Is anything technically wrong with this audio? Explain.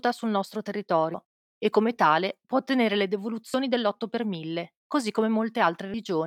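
Yes, there are skips from audio missing between chunks at 1.14 s (after "sul nostro"), 3.54 s (after "tale può ottenere le") and 5.94 s. Each butt-joins a gap of roughly a tenth of a second, likely from lost chunk boundaries about every 2.5 s.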